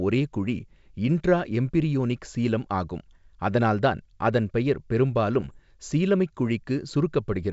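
A speech recording carried over what sounds like a full-rate G.722 wideband link, consistent with 64 kbit/s, shows bit errors on an ADPCM link from 5.41 to 5.57 s. At an error rate of around half a percent, corrupted bits throw the decoder's adaptive step size and predictor off track, so each hit keeps ringing for several milliseconds instead of passing as a single bad sample. For roughly 160 ms the speech breaks into pops and rough, gritty bursts with short jumps in level.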